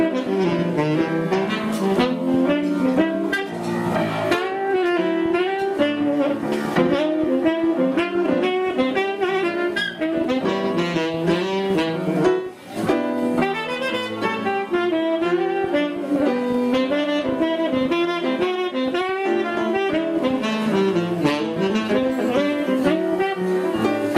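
At 16.16 s there's a tiny block of digital silence, just 0.67 ms long, which fits a 32-sample chunk that never got filled in time. The signal drops straight to silence and jumps back with no fade, so both edges land almost on top of each other and you hear a tick or dip, far too short to register as any sort of gap.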